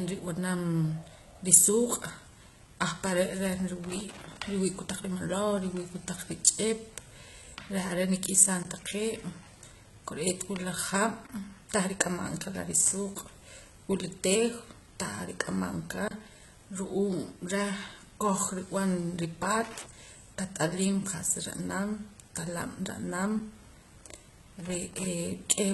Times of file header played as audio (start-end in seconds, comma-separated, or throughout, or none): none